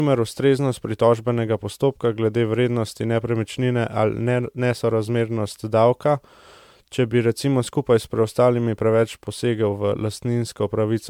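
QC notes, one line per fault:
throughout, generation loss: The speech has a swirly, watery quality, with a hollow, notched tone and consonant onsets that smear instead of snapping. The damage sounds heavier than one pass at a rate that fits 128 kbit/s MP3 would leave. The likely cause is repeated lossy re-encoding, around seven passes. Each pass requantises the signal on a shifted frame grid, so the noise and spectral gaps from every generation pile up and transients blur further.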